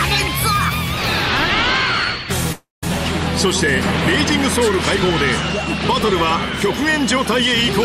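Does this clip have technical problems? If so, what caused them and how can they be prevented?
Yes. From 2.52 to 2.84 s the sound smears into a short fading buzz, drops to silence for about 180 ms, then picks up exactly where it stopped, losing nothing but running 0.3 s late. This call audio freeze likely came from delayed packets emptying the jitter buffer. An adaptive jitter buffer with more headroom, on a less congested network path, would prevent it.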